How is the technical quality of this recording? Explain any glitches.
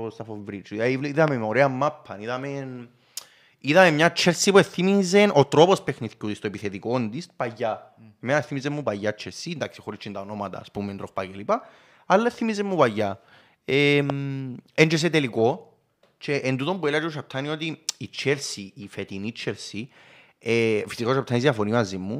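The recording has two loud pops, one at 1.28 to 1.30 s, just before "με ωραία μάπα", and another at 14.10 to 14.12 s. The most likely cause is a sudden voltage step or pulse, such as static, a switch or a connector, entering the signal chain. Each shows up as a single sharp pop peaking around 15 dB above the speech, which continues beneath it.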